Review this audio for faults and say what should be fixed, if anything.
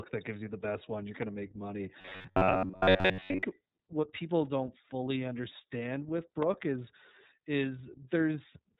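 iLBC codec, throughout the clip. Nothing above 4 kHz comes through, so the speech is boxed into a narrow telephone band and sounds plainly rough and slightly synthetic. This fits iLBC in its 30 ms frame mode at about 13.33 kbps, where each frame's excitation is coded independently and only approximately. Fine texture and the upper consonant band are lost. To prevent it, record or transmit with a wideband codec, or keep an uncompressed copy for review.

Robotic sound from repeated short buffers, from 2.01 s to 3.43 s, starting right after "to make money" and ending just before "what people don't fully". The audio turns into a rigid metallic buzz at 93.8 Hz that only loosely tracks the speech. The likely cause is late-arriving audio being covered by replaying the last block of about 10.7 ms over and over, so most of the real audio in that stretch is skipped. To prevent it, enlarge the playback or jitter buffer and keep the capture and network path from starving.

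Electrical switching spike at 6.43 s, just after "don't fully understand with". A sharp snap sits on top of the sound for about a millisecond, separate from the speech itself. This is likely an arc from a nearby switch, relay or static discharge that was picked up by the audio line. To prevent it, use shielded, properly grounded cabling and keep switching equipment away from the recording chain.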